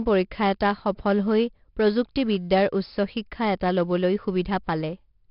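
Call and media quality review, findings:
4-bit ADPCM compression, whole clip. Gritty hiss riding on every loud bit of speech, scaling with level; smeared, crunchy consonant attacks where the step size lags. Top end gone above 5.3 kHz, so it's dull too. Points to an ADPCM stage running around 44 kbps, which fits roughly an 11 kHz sample rate. The codec damage is heavy, so check the encoder settings on that leg first.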